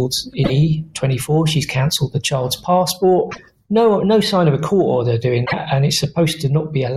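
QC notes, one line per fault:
0.41–0.50 s, 3.28–3.39 s and 5.42–5.53 s: damaged data in a compressed stream. Each time, corrupted bytes in the encoded frames make the decoder misread them and lose sync until it finds the next valid frame header, producing a brief chirp, squawk, click or short hole roughly 0.1 s long.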